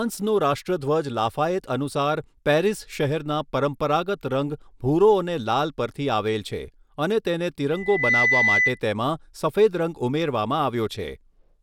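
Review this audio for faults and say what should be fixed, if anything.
A loudspeaker feedback squeal rises from 7.72 s to 8.80 s: a single 2 kHz tone swells over roughly 0.4 s until it sits a few dB above the speech. The microphone is catching its own loudspeaker, and at that frequency the loop gain exceeds one. Unlike an electrical whine, which holds a steady level, this tone grows from nothing. Prevent it by lowering monitor gain, moving the microphone off the speaker's axis, or notching 2 kHz.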